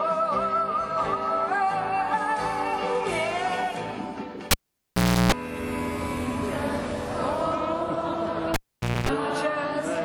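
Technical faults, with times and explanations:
4.51–5.32 s and 8.54–9.09 s, cable pulled and plugged in. A live cable is unplugged with a pop. Silence follows for 0.76 s, then 0.5 s. While only the tip touches, 60 Hz mains buzz sounds for 0.33 s, then 0.24 s. A second pop marks reconnection.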